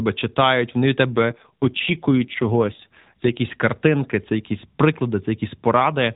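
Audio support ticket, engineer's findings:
Speech turns rougher, more synthetic, 1.12–3.36 s; band unchanged, no dropout. AMR rate drop on the mobile link: network forcing a lower codec mode, bits moved to error protection. Sound fits a step from 12.2 to 5.9 kbps. Quality returns at 3.36 s, back to the normal AMR-NB narrowband sound, nothing above 4 kHz, light codec damage.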